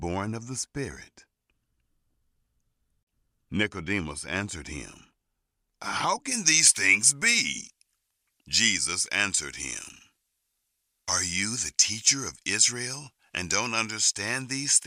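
From about 6.31 s to the end, the speech turns thin, bright and hissy on the sibilants. That's pre-emphasis left on: a J.17-style treble boost was applied but never undone, leaving 10 kHz about 11 dB hotter relative to 1 kHz.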